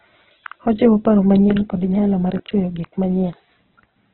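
Speech with heavy Opus compression throughout: nothing above 4.2 kHz and a grainy, rough tone, likely from a music-mode encode at around 8 kbps.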